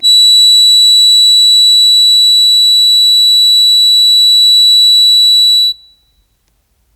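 No technical faults are audible.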